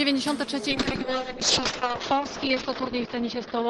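From 0.7 s to the end, a call bitrate drop occurs: the bandwidth estimate collapses, starving the encoder, consistent with a fall from roughly 32 kbps to 6 kbps. Coding turns coarse and rough, and the top end narrows from 20 kHz to 8 kHz, sounding muffled.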